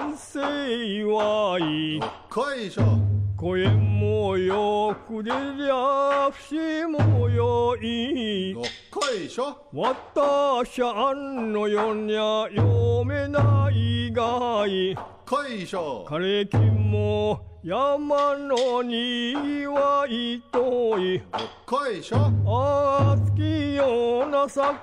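No technical faults can be heard anywhere in the audio.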